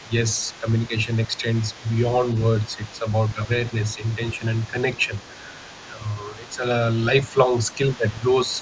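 A faint second voice sits under the speech for the whole clip, from 0.0 to 8.61 s, roughly 25 dB below the main talker. It is most likely the other side's voice leaking through: loudspeaker echo that the echo canceller failed to fully remove from the microphone.

In four stretches, 0.02 to 1.84 s, 2.67 to 5.12 s, 5.91 to 6.64 s and 7.34 to 8.52 s, the main speech dips in short pieces totalling a few tenths of a second each. The dips are about 10 dB, deepening to about 15 dB in the last stretch. This is likely speech suppressed in double talk, where the canceller, unable to separate the talker from the echo, pulled both down. The band ends near 8 kHz, as expected from normal call microphone processing.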